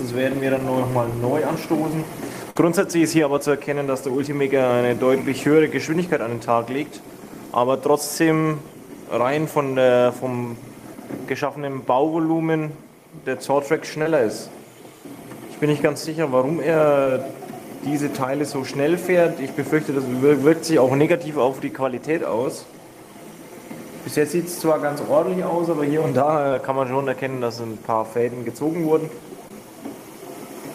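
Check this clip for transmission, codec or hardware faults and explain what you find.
The clip has packet loss in two forms: one short burst early on and four brief concealed dropouts later.

Burst of packet loss at 2.50–2.56 s. About 50 ms failed to arrive, and the receiver extended the preceding sound while fading it, so a held buzz or dimming hiss replaces that stretch before the audio resumes.

Short concealed packet loss at 14.02–14.06, 17.03–17.08, 26.48–26.51 and 29.48–29.51 s. Each time, roughly 20–30 ms went missing and the decoder synthesised a continuation before blending back, heard as a quick smear or wobble.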